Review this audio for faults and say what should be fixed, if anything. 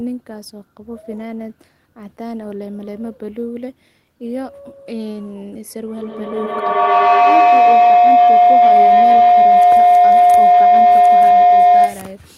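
From 5.98 s to 12.21 s a tone near 700 Hz swells and pulses about ten times a second, climbing to about 15 dB above the speech. This is feedback howl: a second device in the same room is on the call, so the microphone picks up the loudspeaker and each trip around the loop adds level. The loop's delay, about a tenth of a second, sets the pulse. Muting one of the devices in the room, or using headphones, breaks the loop.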